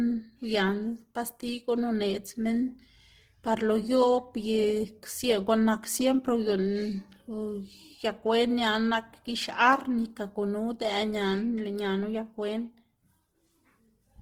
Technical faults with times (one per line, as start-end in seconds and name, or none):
0.00-14.21 Opus compression